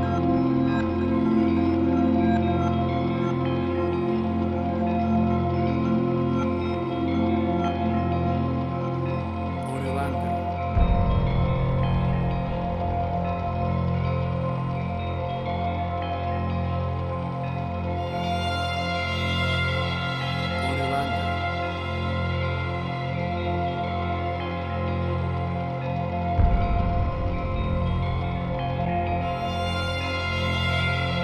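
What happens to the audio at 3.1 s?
Nothing goes wrong at 3.1 s; the audio plays through that moment intact, with no dropout, click or distortion.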